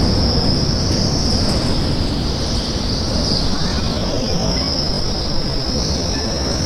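A recording of sounds carries a time-stretched section from 3.46 s to the end, where the pace abruptly slows to about 0.70 times normal speed while pitch stays put, most likely from software stretching the audio to fill a length by repeating short pieces. The slowed part drags. On a spectrogram, events widen horizontally but keep unchanged frequency bands; the waveform shows repeating grain-like segments.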